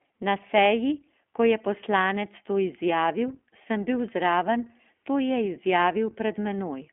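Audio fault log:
throughout iLBC codec: the speech sits in a 250 Hz to 3.4 kHz band and sounds plainly rough and synthetic, which fits iLBC's 15.2 kbps mode with 20 ms frames, each coded independently. A clean telephone band-limit would sound dull but natural.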